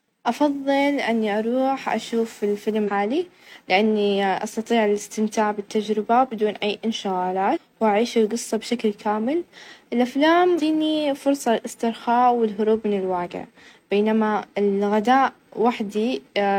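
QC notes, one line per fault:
2.84–2.90 s, 7.53–7.58 s and 10.55–10.61 s, damaged data in a compressed stream: each is a brief glitch of about 50 to 60 ms that cuts across the speech. Part of the encoded data at these points is corrupt, so the decoder cannot read those frames properly, loses its place in the stream and has to hunt for the next valid frame header before normal decoding resumes.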